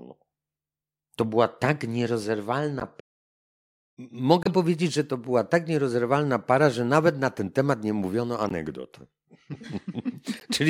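At 1.54 s a corrupt frame decoded leaves a very faint blip, only about -50 dBFS. At 2.80 to 2.82 s, 4.43 to 4.47 s, 8.45 to 8.51 s and 10.37 to 10.43 s, damaged frames, a couple to a few each time, are played anyway. Flipped bits throw gains and spectral codes off, so energy lands at the wrong frequencies and is heard as a squeak or noise burst peaking near -15, -10, -20 and -30 dBFS respectively. On a spectrogram each shows as a short, frame-wide smear or stray band unrelated to the speech harmonics. On a waveform it appears as a brief irregular spike.

From 2.99 to 3.98 s the speech halts mid-flow for about 0.97 s, then resumes. This is a playback stall, likely caused by the player running out of buffered data or its thread being blocked, leaving the output silent until it recovered. The waveform shows a flat, near-silent line across that gap, and the spectrogram a clean vertical blank band with abrupt edges on both sides.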